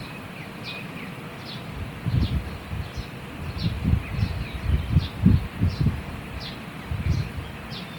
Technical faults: Opus compression

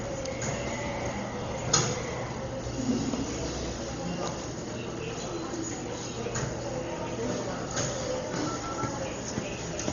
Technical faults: Dolby Digital compression

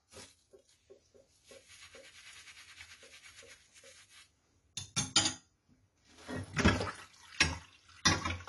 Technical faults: AAC compression

